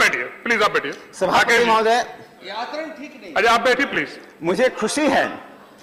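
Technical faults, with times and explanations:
2.03–2.05 s and 3.93–3.96 s, chunks out of order: brief jumbled moments where a 10 ms chunk plays one, then two, chunks late, leaving three hard joins each time.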